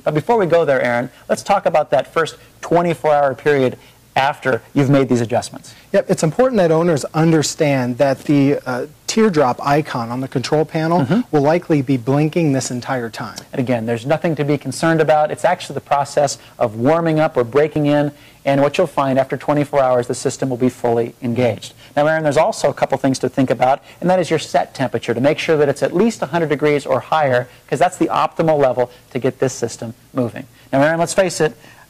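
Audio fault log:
6.32 s and 17.76 s, dropped buffer (overrun): input was likely not collected before the hardware overwrote it, losing about 5 ms and then about 20 ms. The surrounding audio joins with no gap, so at each point the sound jumps ahead.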